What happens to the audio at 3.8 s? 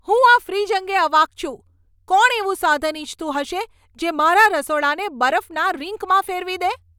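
Nothing goes wrong at 3.8 s: the speech carries on cleanly through that moment with no dropout, click, distortion or other fault.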